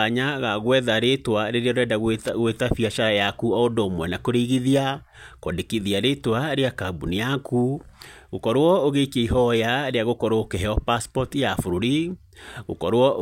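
A worn or dirty contact briefly made and broke the connection, so from 2.21 to 2.29 s the speech is chopped into a short, irregular loose connector crackle.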